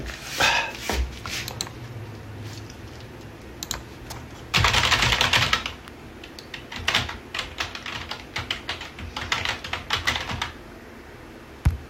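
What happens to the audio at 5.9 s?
At 5.88 s a single electrical switching spike lands on top of the sounds as a sharp snap or tight cluster of clicks, peaking around -20 dBFS. It is likely an arc from a nearby switch, motor or static discharge coupling into the audio line.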